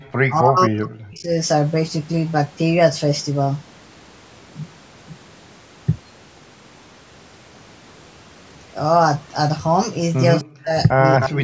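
Speech, with the talker repeatedly pushed down, likely by speech suppressed in double talk. The voice drops deeply from 0.28 to 1.38 s and from 10.43 to 10.77 s. It dips slightly from 10.93 to 11.04 s and moderately from 11.28 s to the end. At 11.2 to 11.29 s, a copy of the voice arrives about 260 ms late, only a little quieter than the speech itself. This is likely an echo leak, where loudspeaker sound slipped past the echo canceller.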